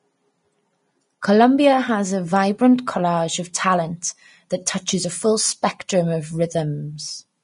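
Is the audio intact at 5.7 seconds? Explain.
No, at 5.7 s the speech carries the same damage heard across the whole clip, likely Vorbis compression. Nothing sits above about 10.6 kHz, and the treble that remains is quantised so coarsely it turns to grainy hiss, which fits a low bitrate around 31 kbps.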